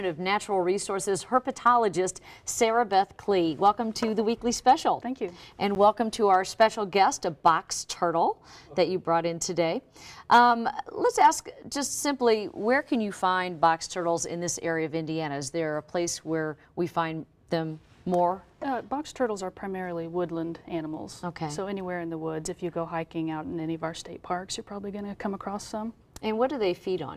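At 5.75 s there is a brief tick, a momentary dip in the sound. This is a block of digital silence about 10 ms long: samples replaced by zeros, so the audio drops out and returns abruptly, without any fade.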